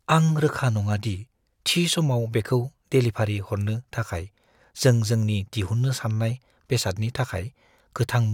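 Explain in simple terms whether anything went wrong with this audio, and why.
Nothing went wrong with this speech recording, because no technical fault can be heard anywhere in it. Listening closely from beginning to end turns up nothing that needs explaining.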